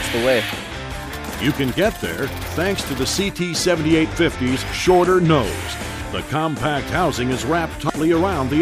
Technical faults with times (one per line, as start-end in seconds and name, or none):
7.87-7.90 damaged data in a compressed stream